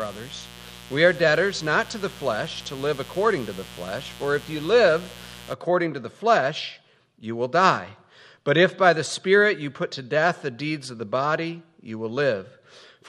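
The audio carries a mains buzz from the start to 5.54 s, a raspy 60 Hz hum roughly 20 dB below the wanted sound, caused by switching spikes leaking in twice per cycle. A spectrogram shows dense horizontal lines every 60 Hz reaching several kHz, and the waveform shows sharp spikes repeating 120 times a second.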